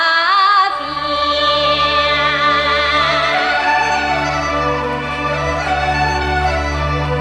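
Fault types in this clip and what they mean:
Nothing here calls for a fault label, since nothing in the clip breaks up, drops out, distorts or glitches along the way.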